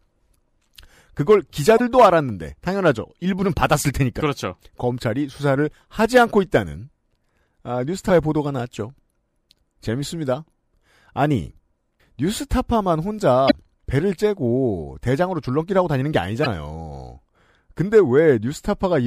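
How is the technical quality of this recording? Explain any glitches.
The recording has five brief glitches, all damaged data in a compressed stream, at 1.77–1.81, 4.17–4.21, 8.06–8.10, 13.47–13.52 and 16.42–16.46 s. Corrupted bytes make the decoder misread frames and lose sync, producing roughly 40 ms disruptions heard as a chirp, squawk, click or short hole.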